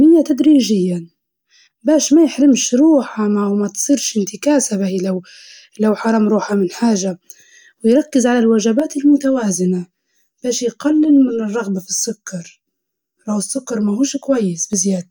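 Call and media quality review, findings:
Speech goes hollow and phasey from 8.80 to 14.73 s, right after "ويركز على". Channel delay (comb filtering): one channel is running around 10 ms late before the mono sum, so fixed notches start near 50 Hz and repeat about every 100 Hz. Probable component is the stereo-to-mono downmix or a capture buffer path.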